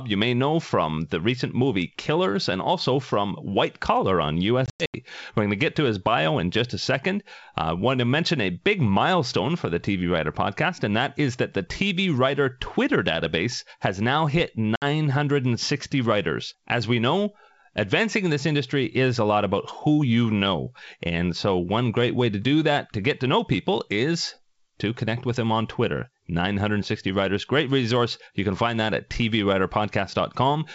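Packet loss on an ADPCM call hits at 4.66–4.96 s, where about 200 ms of speech drops out in gaps over 280 ms (longest 100 ms), and at 14.76–14.84 s, a 60 ms gap after "database has now hit". The waveform shows flat, hard-edged holes, and the spectrogram shows blank vertical bands. Each hole is followed by brief, slightly distorted speech while the G.722 decoder's predictor and step size resync with the sender's.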